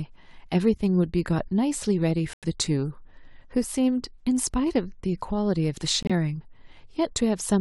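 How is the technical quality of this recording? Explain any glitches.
The speech is marred by two corrupt frame muted faults, at 2.33 to 2.45 s and 6.03 to 6.11 s. Damaged compressed frames were rejected by the decoder and replaced with silence. The gaps of 0.11 s and 0.09 s each point to several consecutive frames. Unlike a tape or cable dropout, each hole starts and ends abruptly, and timing stays intact rather than skipping ahead.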